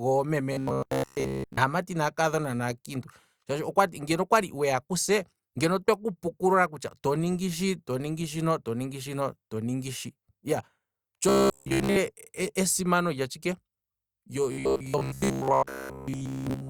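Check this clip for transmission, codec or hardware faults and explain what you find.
The speech carries robotic sound from repeated short buffers at 0.53–1.57 s, 11.29–11.96 s and 14.52–16.69 s. Each time the voice turns into a rigid metallic buzz near 66.8 Hz, wholly in the first two stretches and mostly in the last. That pitch matches a buffer of about 15 ms being looped while fresh audio is skipped, likely from input arriving too seldom. Unlike mains hum, the buzz stops outside these stretches and still roughly tracks the speech.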